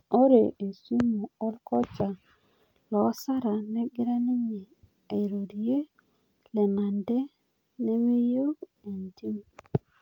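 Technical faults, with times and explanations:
Nothing in the speech stood out as a technical problem on listening.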